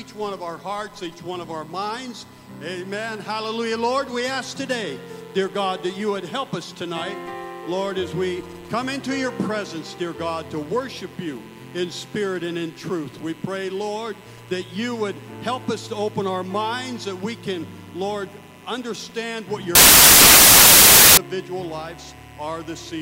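Samples built from the wrong bytes, from 19.75 to 21.17 s: for about 1.4 s the bytes of each sample are assembled in the wrong order or alignment, so the rapidly changing low-order bits land in the most significant positions, turning the sound into loud, harsh broadband noise.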